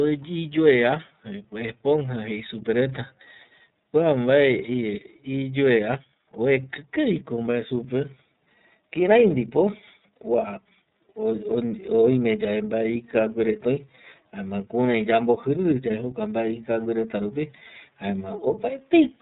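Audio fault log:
Throughout: iLBC codec. Nothing above 4 kHz survives, so the speech sounds narrow, rough and synthetic. The coarse texture fits 30 ms frames at 13.33 kbps.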